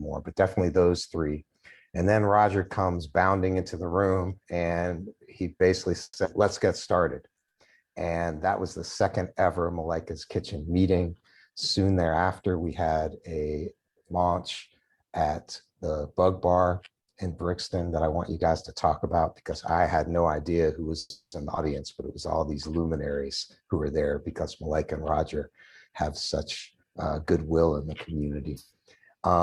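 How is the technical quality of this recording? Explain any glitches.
The recording has repeated network-delivery glitches: two freezes, two forward skips, a stretch of slowed playback and three stretches of hurried playback, all grouped around 6 s and from 11 s onward.

Call audio freeze, at 6.03 to 6.19 s and 21.0 to 21.35 s. The sound stalls and is briefly drawn out as a fading buzz or hiss that drops to silence for the last 40 ms and 110 ms respectively. The likely cause is packets held up in transit until the jitter buffer emptied, with the receiver extending the last sound. Playback then resumes where it left off, so nothing is lost. Instead, 130 ms and 320 ms of delay are added.

Skip ahead, at 6.24 to 6.28 s and 21.56 to 21.6 s. Each follows a freeze closely. Playback jumps forward with almost no gap, dropping roughly 70 ms and 100 ms of audio. Newer audio was already queued when a stretch was dropped, either in transit or by the jitter buffer as it overflowed. 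The two sides of each jump are spliced nearly directly.

Jitter buffer slow-down, at 6.67 to 7.78 s. The buffer was running low or had just raised its target delay, so it was building a reserve. The receiver repeated single pitch periods many times in a row, adding 72 ms in total. Playback runs at 94% speed with the pitch unchanged, so sounds are slightly stretched and drawn out across that second.

Jitter buffer speed-up, at 11.50 to 12.63 s, 23.22 to 25.9 s and 26.84 to 27.34 s. The buffer held more audio than its target, so the receiver trimmed short pitch-period pieces again and again. About 150 ms is cut in the first stretch at 110% speed. The second runs at 106% and loses about 200 ms, and the third runs at 106% and loses about 40 ms. The pitch holds, but the pacing sounds hurried.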